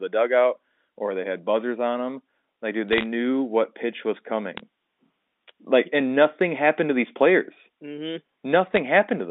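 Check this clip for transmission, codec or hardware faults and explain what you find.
Three short bursts of bit errors on a digital phone line stand out, heard over a G.711 mu-law telephone path whose 200 Hz to 3.6 kHz band is otherwise intact.

The bursts fall at 2.89 to 3.04 s, 4.57 to 4.60 s and 8.67 to 8.78 s. Flipped bits, at a rate of a few tenths of a percent, corrupt individual log-scaled samples, and hits on the sign or high bits jump to wild values. The result is sharp isolated ticks and crackle laid over speech that continues unbroken. Dropouts or packet loss would mute or smear the sound instead.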